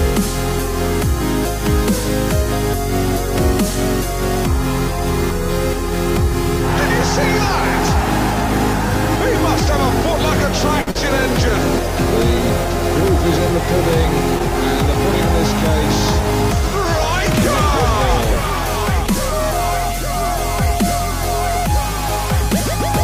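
A short stall from a late packet at 10.81 to 10.89 s holds the sound for about 55 ms while the jitter buffer sits empty, then resumes with nothing lost but 55 ms more delay. Short concealed packet loss follows at 10.91 to 10.97 s: roughly 40 ms of audio never arrives, and the receiver extends the preceding sound for 38 ms, leaving a brief smear.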